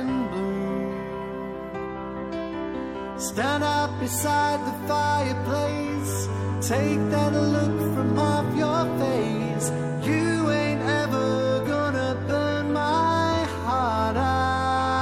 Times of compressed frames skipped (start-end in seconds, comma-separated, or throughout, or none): 11.61-11.67